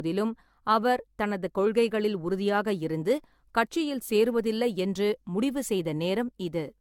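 Generation loss runs right through the speech: swirly, hollow, blurred attacks and nothing above 17 kHz, likely from about seven AAC-LC passes near 96 kbit/s.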